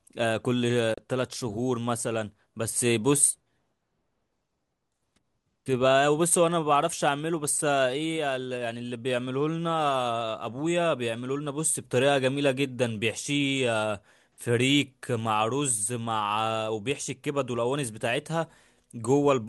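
At 0.94 s the speech snaps to silence in a fade of about 3 ms and returns at 0.98 s, leaving a brief hole. This is a digital broadcast dropout: the receiver muted over a stretch that fits a single corrupted frame, so that audio is gone.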